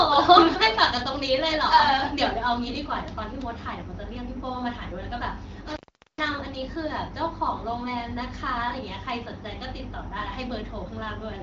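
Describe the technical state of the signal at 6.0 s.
At 6.0 s you're right in the middle of an intermittent contact fault, running from about 5.68 to 6.27 s. A loose plug or cable briefly opens, so the speech drops out for roughly 0.42 s, with crackle at the edges and just faint hiss in the gap.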